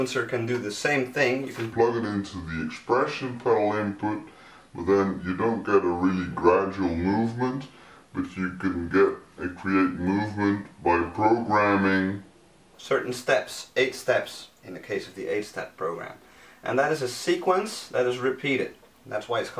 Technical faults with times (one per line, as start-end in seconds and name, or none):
1.72-12.75 wrong sample rate